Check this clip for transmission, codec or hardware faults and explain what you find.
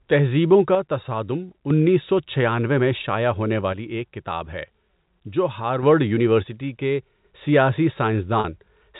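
Two kinds of fault are present: three stretches where one stereo channel drops out, and one brief packet loss concealed by pitch repetition near the end. The speech also carries G.711 mu-law telephone coding at 64 kbps, which limits it to below 4 kHz.

One channel drops out from 0.75 to 1.70 s, ending just before "سو چھیانوے میں شائع"; from 3.73 to 5.83 s, starting just after "چھیانوے میں شائع ہونے"; and from 6.47 to 7.25 s. In each stretch the level falls abruptly by about 6 dB and recovers just as abruptly. The likely cause is one channel of a stereo pair going silent before the mono sum. Material common to both channels then arrives at half amplitude, which is the 6 dB step.

Packet loss with pitch repetition occurs from 8.40 to 8.44 s, a 40 ms gap, which fits two 20 ms packets. The receiver filled the gap by repeating the last pitch period of the speech and fading it out. Because the gap is this short, the fill is heard as a momentary held, slightly buzzy tone rather than silence, followed by a quick cross-fade back into the speech.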